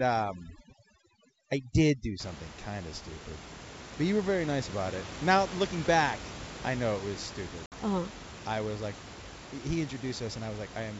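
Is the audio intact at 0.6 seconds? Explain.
No. Overdone noise removal runs from 0.0 to 2.2 s, pulling noise-like frequency bands far down, so the background nearly vanishes into twinkling specks and quiet parts of the speech go with it.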